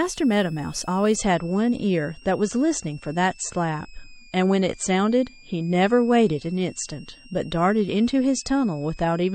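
A speech clip with two problems. A switching supply whistle runs the whole way through, a thin high tone wandering between about 2.36 and 2.79 kHz, sitting well under the voice, probably from a power supply ticking over in its audible burst mode. Then at 1.16 s the quality drops suddenly, with no gap, and stays down to the end. That's an adaptive stream switching to a lower bitrate: everything above 8.6 kHz is gone and the artefacts thicken, which fits a fall from around 128 to around 40 kbit/s MP3.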